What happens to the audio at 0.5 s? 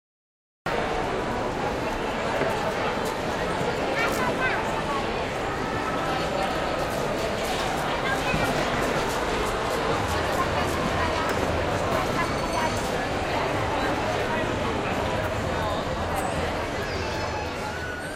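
At 0.5 s there is still nothing to hear: the clip sits in digital silence from the start until 0.66 s, when the sound bursts in already in progress, with no natural attack or fade-in to lead into it. This is a cut-off start. The recording or stream began late, so capture picked up in the middle of an ongoing sound, leaving its true onset missing before the abrupt entry.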